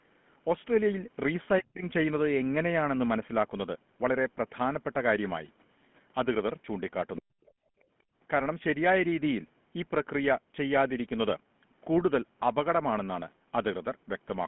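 Speech heard through a narrowband phone chain, with the buzzy, gravelly roughness of the GSM full-rate codec throughout; the audio is confined to roughly 150 Hz to 3.4 kHz, which fits a 13 kbps GSM stream. The speech drops sharply from 1.6 to 1.84 s and from 7.18 to 7.41 s, falling by roughly 40 dB, most likely speech suppressed in double talk as the echo canceller ducked the talker along with the echo. From 7.46 to 7.52 s a very faint scrap of what is likely the other side's voice leaks through, far below the talker. From 7.69 to 7.86 s the room background is gated by the echo canceller, dipping by about 30 dB before returning.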